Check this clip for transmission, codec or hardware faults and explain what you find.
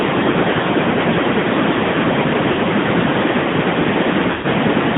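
Two faults are present: mobile codec coloration throughout, and two dropouts from lost speech frames.

Throughout, the AMR narrowband mobile codec confines speech to 150 Hz to 3.6 kHz. The vocal-tract model turns the voice plainly buzzy and synthetic, consistent with a rate around 10.2 kbps.

From 2.52 to 2.60 s and from 4.32 to 4.46 s, lost AMR speech frames leave gaps. The decoder repeats the last good pitch and filter settings at falling gain. The 60 ms gap, consistent with three 20 ms frames, is drawn out and fades. The 120 ms gap, consistent with six frames, drags out and fades toward silence.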